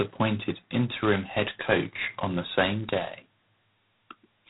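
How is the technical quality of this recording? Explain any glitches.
Technical quality is poor, with one fault running through the whole clip. G.726 ADPCM, throughout: each sample is coded as a tiny difference from a running prediction, and the heavy coarse-step damage fits the 16 kbit/s mode. The speech carries a harsh, rasping hiss that rises and falls with its level, and nothing passes above 3.8 kHz.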